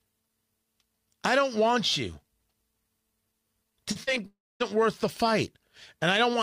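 Packets arrived too late for the decoder at 3.91–3.97, 4.03–4.09 and 4.15–4.18 s, giving short concealed packet loss: about 40, 40 and 20 ms went missing, and 37, 38 and 12 ms were patched by extending the preceding speech, heard as brief smears or wobbles. From 4.26 to 4.62 s the audio cuts out, likely a long network dropout: the last sound is stretched into a fading buzz or hiss for about a third of a second, leaving roughly a quarter-second of silence before speech resumes with that portion gone.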